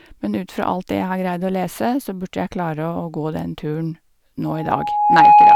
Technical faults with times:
4.45-5.56 loudspeaker feedback squeal

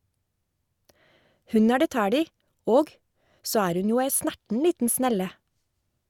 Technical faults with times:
none

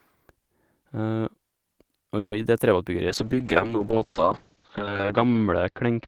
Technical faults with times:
2.18-2.33 call audio freeze
2.42-2.44 short concealed packet loss
3.09-6.07 call bitrate drop

